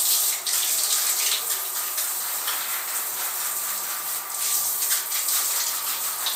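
No technical faults can be heard anywhere in this recording.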